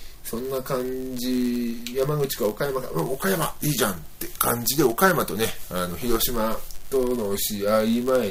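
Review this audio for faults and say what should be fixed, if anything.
Block size mismatch (padded), present from start to end: a buzz runs under the audio at 99.6 Hz. One stage hands over blocks slightly shorter than the next stage expects, and the shortfall in each block is filled with zeros. That leaves a tiny silent gap roughly every 10 ms, and those regular dropouts produce the buzz. The inserted gaps also stretch the timeline, so playback runs at 0.996 times normal speed while the timbre stays the same.

To prevent it, make the writing and reading stages agree on one block size, or add a buffer that collects samples until a full block is available instead of padding.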